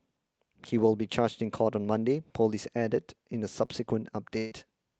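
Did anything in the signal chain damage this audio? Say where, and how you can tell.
Yes. A short concealed packet loss in the network stage sits at 3.65 to 3.70 s. About 20 ms of audio failed to reach the decoder in time. The receiver papered over the hole with roughly 23 ms of synthesised continuation of the preceding sound, then crossfaded back into real audio. That gives a brief smear or wobble rather than a clean dropout.

A burst of packet loss follows at 4.38 to 4.53 s, also a network fault. About 140 ms went missing in a row, and the concealment stretched the last sound across roughly 135 ms while fading it down, with no drop to silence. Voiced material turns into a held, decaying buzz, and unvoiced material turns into a fading hiss. When the audio resumes, the content from that span has been skipped, not delayed. Both events play through the Opus call path, whose band-limiting to about 8 kHz applies throughout.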